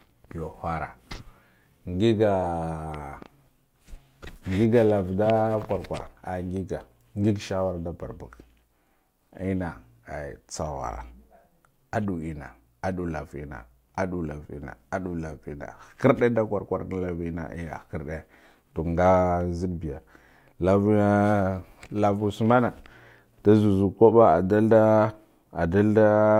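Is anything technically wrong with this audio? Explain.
No, nothing technically wrong can be heard in this speech clip. No fault in the recording or playback chain shows up anywhere in it.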